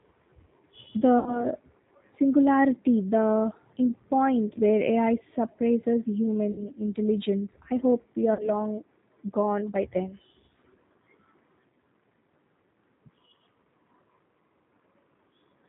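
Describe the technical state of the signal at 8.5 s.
At 8.5 s the signal sits at the tail of a stretch of VoIP packet loss concealed by the speech codec, running from 8.34 to 8.50 s. About 50 ms of audio went missing, which fits five 10 ms frames, and the decoder filled the gap by repeating its last pitch and vocal tract filter at falling gain. The result is a smeared, buzzy tone or coloured noise that fades rather than a silent dropout or a click. The damage also outlasts the gap itself, because each rebuilt frame depends on the one before. A plain dropout would stop cleanly, and a jitter-buffer glitch would typically repeat or skip audio intact.

Underneath, as across the whole clip, runs the G.729 codec at 8 kbit/s, with damage that is plainly audible. Every 10 ms frame is rebuilt from a vocal tract filter, a pitch predictor and a handful of pulses, so the speech comes through slightly rough and synthetic, with nothing above 4 kHz. 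That steady coarseness is what separates it from the concealment, which is brief and localized. Unlike a simple low-pass filter, it adds grainy, artificial texture rather than only dulling the sound.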